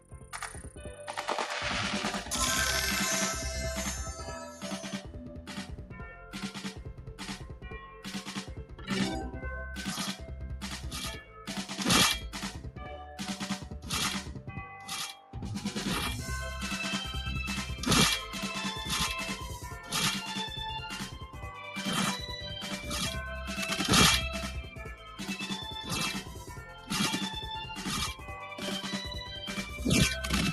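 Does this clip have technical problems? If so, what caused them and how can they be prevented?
Yes. The channel delay (doubling) runs through the whole clip. One channel arrives about 92.9 ms late, which fits a 4096-sample buffer, and summing both to mono gives every event a same-level copy heard as a slap or doubling. On a waveform, each transient appears twice, the second one roughly 93 ms after the first at matching height. To prevent it, align the channels before the mono fold-down, or use only one channel.

A noise suppressor applied to music or sounds is also active throughout. Built for speech, it treats steady tones, ambience and reverb as noise and pulls them down, so the level swings by roughly 10 dB as it engages and releases. On a spectrogram, sustained bands and tails visibly dim and recover instead of holding steady energy, and the waveform envelope rises and falls without matching the source. 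To prevent it, bypass speech noise suppression whenever the input is not speech.

The sound cut by the noise suppressor shows up as deeper dips at 0.0–1.0 s (about 12 dB), 4.18–11.48 s (about 11 dB), 12.53–15.35 s (about 11 dB), 19.65–19.92 s (about 6 dB), 21.13–21.42 s (about 8 dB), 24.66–25.21 s (about 7 dB) and 26.22–26.91 s (about 7 dB). In these spans the suppressor judged the material to be noise and attenuated it below its surroundings. On a waveform they appear as shrunken stretches, and on a spectrogram as darker patches. To prevent it, disable the suppressor or raise its threshold for this kind of material.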